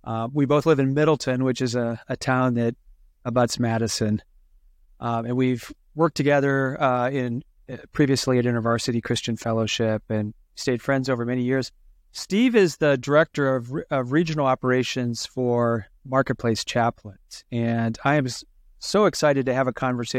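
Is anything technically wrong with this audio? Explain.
No, nothing technically wrong is audible in this recording.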